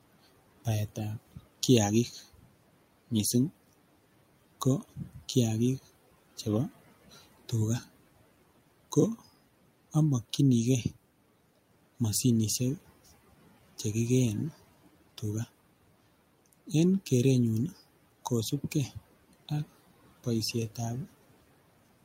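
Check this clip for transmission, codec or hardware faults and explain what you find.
Two kinds of fault are audible: the noise suppressor clips speech twice, and short stretches of audio play out of order twice.

Speech cut by the noise suppressor happens at 2.33 to 2.55 s, just after "baetab kiagik", and at 4.96 to 5.21 s, just before "kiagik chebo". The suppressor mistook quiet speech energy for the room noise, which sits about 21 dB below the speech. It pulled level down by up to about 15 dB and about 13 dB, over roughly a tenth of a second each time, so those sounds come out swallowed and faint. On a waveform the envelope dips abruptly. On a spectrogram the harmonics and fricative energy thin out into a darker patch, with the background floor dropping along with them.

Chunks out of order occur at 5.78 to 5.84 s, right after "ko kiagik", and at 9.00 to 9.04 s. In each case a short block of audio was delivered or written late and slotted in after material that should have followed it. 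The first is displaced by two blocks and the second by one, consistent with roughly 20 ms chunks. Each is heard as a brief jumbled stutter. A waveform shows discontinuities at the hard joins. A spectrogram shows vertical broadband lines there and formant tracks that jump back and forth instead of flowing.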